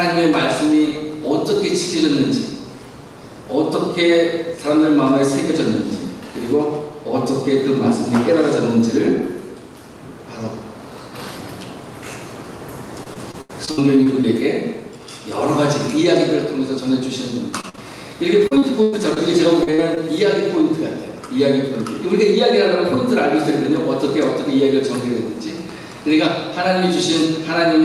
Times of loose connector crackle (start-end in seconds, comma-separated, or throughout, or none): none